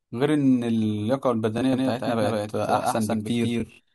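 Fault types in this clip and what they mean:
Bluetooth stutter: Late or lost wireless packets make the receiver replay its last chunk of audio. At 1.6 s one repeated slice, about 23 ms, fits a single lost packet. At 3.60 to 3.80 s, repeats cover about 116 ms and become a buzzy stutter.
Doubled audio track: From 1.73 s to the end, a second full-band copy of the speech plays around 150 ms behind, about as loud as the original. It starts abruptly, with no decay or room colour. It is likely from a slower second capture path.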